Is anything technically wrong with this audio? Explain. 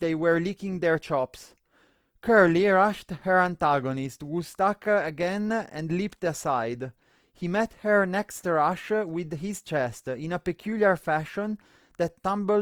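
Yes, Opus compression is plainly audible throughout the speech, likely from its CELT music mode at a low rate, fitting about 24 kbps. Bit-starved bands get filled with folded or noise content, so the speech sounds grainy and rough rather than swirly, while the bandwidth still reaches 20.2 kHz.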